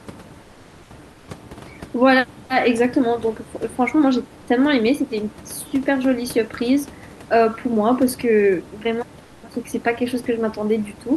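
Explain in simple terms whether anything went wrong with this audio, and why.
Comfort noise in place of the background, likely from the sender pausing transmission in quiet gaps: at 0.41–0.89 s, 1.13–1.27 s and 9.23–9.43 s, the natural room hiss becomes a flat, slightly quieter artificial noise.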